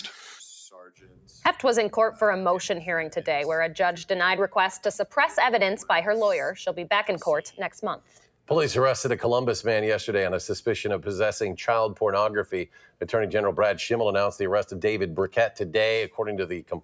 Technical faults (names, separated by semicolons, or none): noise suppressor applied to music or sounds; sound cut by the noise suppressor